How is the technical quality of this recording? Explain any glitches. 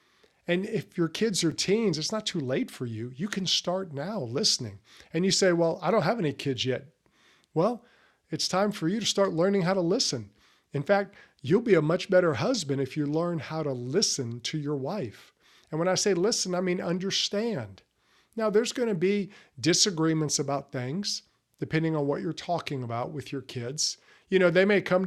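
Two brief repeated-buffer glitches occur, at 1.52 s and 16.39 s. Each time the device replayed its last 5.8 ms block once when new audio arrived late, which fits a 256-sample buffer. With such a small block, the hard joins sound like a click rather than a stutter. Unlike a dropout, there is no silent gap.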